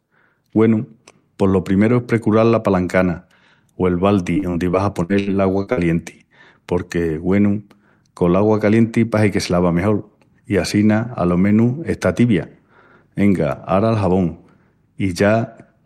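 Repeated packet loss (robotic sound) from 4.33 to 5.79 s, right after "la palancana o el": eight dropouts, the longest 76 ms, patched by stretching prior sound, giving choppy speech with pieces missing.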